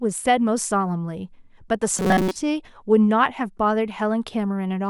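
From 1.98 to 2.36 s the speech goes robotic, a rigid metallic buzz at 188 Hz that follows the words only roughly. Most likely repeated short buffers: the same roughly 5 ms slice looping for most of that stretch while fresh audio gets dropped.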